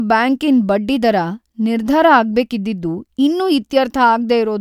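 Just a stretch of speech, and there's nothing technically wrong to flag anywhere in it.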